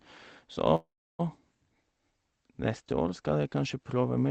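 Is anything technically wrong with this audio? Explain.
Yes, there is a call audio freeze from 0.75 to 1.21 s. Packets were likely delayed, emptying the jitter buffer. The receiver extended the last sound into a fading buzz, then 320 ms of silence. Speech resumes where it stopped with nothing lost, but 436 ms later.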